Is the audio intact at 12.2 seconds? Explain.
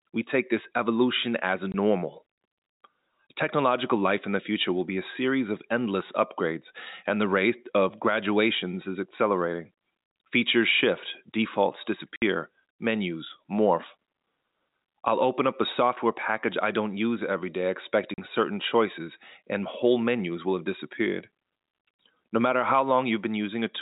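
No. Packet loss filled with silence cuts a 60 ms hole from 12.16 to 12.22 s, between "shift defaults" and "menus morph". The hard-edged gap, likely three packets, isn't a fade or a smoothed concealment.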